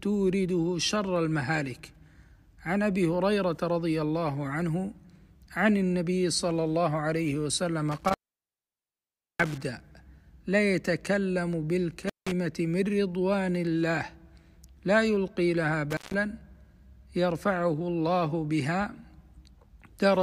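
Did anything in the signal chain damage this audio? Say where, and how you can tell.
Yes, intermittent contact in the analogue wiring. The sound drops out with crackly edges at 7.92–9.62, 12.02–12.32 and 15.91–16.14 s, as a loose plug opens the line.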